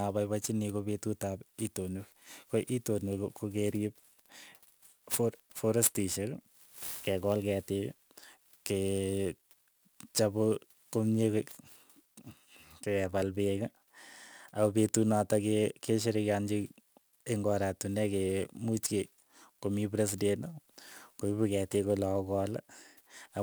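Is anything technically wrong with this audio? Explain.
Yes, there's sample clock jitter through the whole speech clip. The converter's clock wobbles by something like 7 microseconds, so samples land slightly early or late. That timing error bites hardest on steep, loud, bright passages, adding a gritty hiss about 20 dB below the signal that disappears in the pauses.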